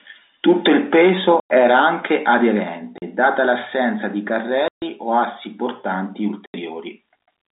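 Speech over a narrow telephone-band line is cut by four abrupt dropouts of dead silence: at 1.4 s (100 ms), 2.98 s (40 ms), 4.68 s (140 ms) and 6.46 s (80 ms). This is packet loss filled with silence. Chunks of audio never arrived, and the receiver played nothing in their place. Every gap is a multiple of 20 ms, which fits 20 ms packets carried over G.711 telephone coding.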